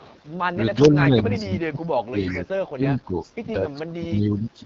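Throughout, the speech sounds rough and raspy with nothing above 7.5 kHz. This is the AMR wideband (HD Voice) codec, and the damage fits one of its lowest rates, around 8.85 kbit/s. From 0.0 to 0.2 s a faint delayed copy of the voice trails about 368 ms behind. This is an echo leak, likely a loudspeaker echo the loudspeaker side's canceller failed to remove. From 0.75 to 1.79 s the voice dips by up to about 25 dB in pieces, and the same echo returns at 0.84 s and, louder, at 1.35 s. The dips are speech suppressed in double talk, likely the echo canceller turning everything down while both sides spoke. The pattern repeats from 2.09 to 3.41 s, with a fairly clear echo at 2.31 s and a faint one at 3.22 s. From 3.91 s to the end the voice drops again, by up to about 20 dB.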